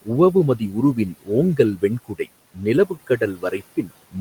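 Speech in which the noise suppressor cuts the speech at 0.57, 0.95, 1.57, 2.08, 2.54 and 2.85 s, the last stretch running to 3.91 s. Quieter parts are turned down by about 14 to 19 dB along with room noise lying about 22 dB below the speech, leaving them faint and swallowed rather than abruptly silent as in a dropout.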